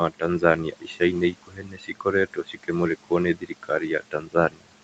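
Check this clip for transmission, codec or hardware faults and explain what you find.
Two faults stand out, both from the noise suppressor on this speech, heard over a room noise sitting about 16 dB below the voice and a call path whose top end stops at 8 kHz.

Noise suppressor artifacts run through the whole clip. The background sinks in the gaps and swells back under the speech. The suppressor is pulling down bands it judges to be steady noise, frame by frame, by about 18 dB.

Speech cut by the noise suppressor occurs at 0.64–1.02 s, 1.32–2.06 s, 2.27–2.7 s, 3.34–3.83 s and 4.0–4.71 s. Parts of the voice turn faint or swallowed for a few hundred milliseconds each, dropping about 16 to 19 dB. Here the suppressor mistook quieter speech for noise and attenuated it with the background.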